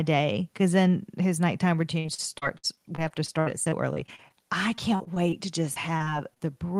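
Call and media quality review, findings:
Choppy, robotic speech, fragments missing: 1.99–4.32 s after "because then his nighttime", 4.76–5.34 s before "to just", 5.74–6.42 s after it. Repeated packet loss; concealment repeats the last audio over gaps up to 63 ms.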